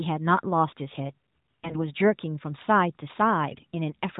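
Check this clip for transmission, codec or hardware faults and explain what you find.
There is one transmission fault, a short burst of AMR bit errors in the narrowband AMR-NB mobile speech. From 1.64 to 1.85 s, around one bit in ten of the weakly protected codec data flipped. This misplaces excitation pulses and skews the gain and spectral values, so the voice turns hoarse and gargly. On a spectrogram, the harmonics smear into ragged noise below the 4 kHz ceiling, while the waveform keeps a similar level.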